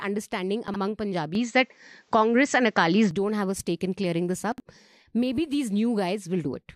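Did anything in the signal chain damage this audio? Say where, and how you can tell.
Yes, two kinds of damage. At 0.68 to 0.76 s, and again at 4.52 to 4.60 s just after "stake in clearing this", there's chunks out of order in the buffer stage. A 20 ms chunk lands three chunks late, so 80 ms comes out jumbled with three hard joins.

From 1.35 to 3.11 s the sound goes dull and boxy with no gap at the changeover. Nothing comes through above 8 kHz, the level shifts by around 5 dB, and a faint new noise floor appears. That's likely the input switched to a poorer device.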